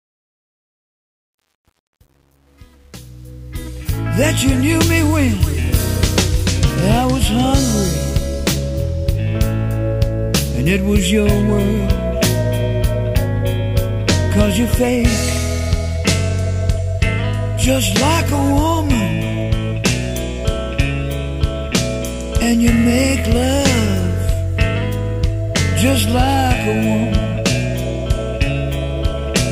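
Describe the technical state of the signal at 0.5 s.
At 0.5 s the signal is in truncation distortion on a fade-in, which runs from 0.0 to 4.17 s and is worst up to 3.42 s. The fade keeps too few bits and adds no dither, which points to roughly 9-bit resolution. Near the bottom, the waveform collapses into coarse steps. The sound is gritty.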